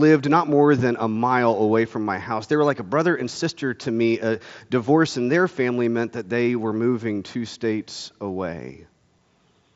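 No faults heard in this speech; it passes through a Bluetooth mSBC headset path, bandwidth topping out around 7.7 kHz.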